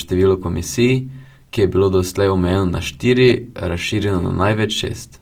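Throughout the speech, voiced tones sound grainy, rough and noisy rather than swirly, while the band stays open to about 20.2 kHz. This is likely Opus compression in music mode, at a rate that fits 24 kbps, filling starved bands with noise.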